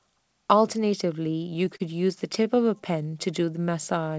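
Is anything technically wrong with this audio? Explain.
Yes. Between 1.32 and 1.82 s, and again between 2.20 and 2.58 s, the speech drags and stutters. These are repeated stalls (stutter): packets arrived late, the jitter buffer kept running dry, and the receiver stretched the last sound to fill each gap, about 78 ms and 42 ms in total. The band stops at 8 kHz, as expected for a G.722 call path.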